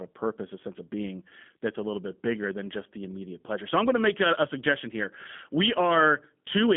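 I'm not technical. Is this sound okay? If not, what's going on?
No. G.729 codec damage runs the whole way through. This phone-call codec rebuilds the speech from a simple model and drops everything above 3.8 kHz, so it sounds muffled and slightly robotic.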